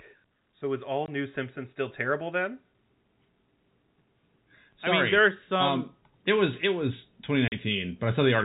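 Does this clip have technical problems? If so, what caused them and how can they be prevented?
Yes. The speech level climbs twice from automatic gain rising. From 0.59 to 2.62 s the level creeps up by about 5 dB, and from 4.84 to 8.4 s by about 6 dB. Voice and background noise swell together, which is the signature of a gain controller that judged the input too quiet and kept turning it up. Prevention: set a proper input level at the microphone and limit the AGC's maximum gain and attack rate.

There are also two holes of packet loss filled with silence. The first runs from 1.06 to 1.08 s and lasts 20 ms, which fits one lost 20 ms packet. The second, from 7.48 to 7.52 s, lasts 40 ms, consistent with two consecutive packets. The receiver inserted pure silence, leaving hard-edged gaps in the telephone-band G.711 signal. Prevention: use a jitter buffer with packet loss concealment and a more reliable network path.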